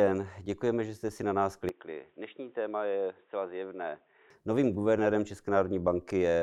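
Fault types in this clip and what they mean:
Input switched to a poorer device: the speech abruptly turns boxy, loses everything above 3.8 kHz, and drops about 5 dB with new noise, likely another input rather than a filter.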